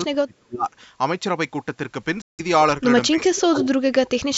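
From 0.09 to 0.67 s the sound sinks by as much as about 30 dB. This is speech suppressed in double talk, likely an echo canceller ducking its own talker while the far side also spoke. The same dipping returns from 3.11 to 3.65 s, at about 25 dB, and from 3.9 s to the end, at about 35 dB.

At 2.22 to 2.41 s a silent hole of 171 ms opens. This Bluetooth dropout likely comes from packets reaching the headphones too late, which fits about eight lost frames. The sound resumes further on, as though it had kept playing, rather than picking up where it broke off.

From 3.58 to 3.69 s a copy of the speech returns 298 ms late, only about 5 dB below the direct sound. This echo leak likely comes from a loudspeaker's sound that the canceller failed to remove. It adds a trailing repeat, where double-talk suppression only takes level away.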